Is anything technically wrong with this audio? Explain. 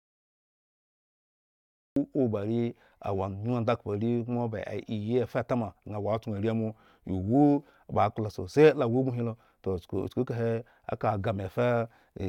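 Yes, there are two faults.

The first is a cut-off start. From 0.00 to 1.96 s there is only digital silence. At 1.96 s the speech begins abruptly, already in the middle of a sound. There is no natural attack or fade-in. The recording or stream began late, so the opening of the sound was never captured. It is heard as a sudden jump from dead silence into speech.

The second is a drift correction step. From 6.05 to 7.35 s the speech slows by 5.5% and drops in pitch by 97 cents, nearly a full semitone. Speed and pitch fall together, then snap back to normal at 7.35 s. The likely cause is clock-matching software changing the playback rate in one step to manage its buffer. It is heard as a brief, sudden detuning downward.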